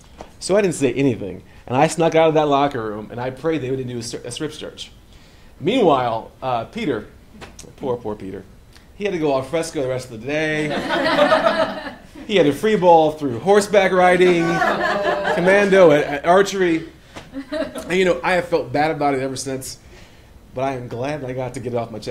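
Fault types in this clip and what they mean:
No technical faults can be heard anywhere in the audio; the signal stays continuous and steady throughout.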